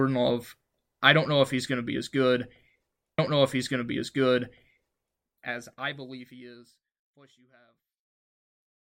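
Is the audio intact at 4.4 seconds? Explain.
No, 4.4 s falls inside a stream segment repeated from 3.18 to 5.20 s: the same 2.02 s of speech replays, with a blip at the jump back, before the speech continues with "as I believe he". Unlike an echo, nothing overlaps.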